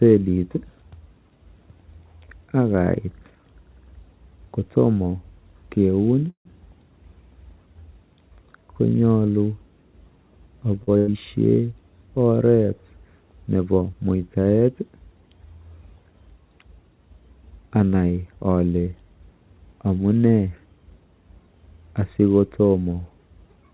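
At 6.30 s the sound stalls for about 150 ms, up to 6.47 s. A short, fading continuation of the last sound drops into silence for about 110 ms, then the audio picks up exactly where it left off. Nothing's lost, it's just pushed later. That pattern is likely a call audio freeze: packets got held up in transit, the jitter buffer drained, and the receiver filled the wait before carrying on.

From 10.83 to 10.89 s there's a short stall from a late packet, about 40 ms. The receiver simply stretched the last bit of sound while it waited for the packet, so you hear a slightly overlong, faintly buzzy hold. Then playback resumes from the same spot with nothing missing, just a touch of added delay.

Right after, from 10.97 to 11.09 s, comes a burst of packet loss. Roughly 100 ms of audio never made it in time. The receiver papered over it by extending the preceding sound and letting it fade, with no actual silence in there. 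When the audio comes back it has jumped ahead, so that stretch is gone for good. It's all heard through a band that tops out at 4 kHz, which fits a G.711 mu-law call path at 64 kbps.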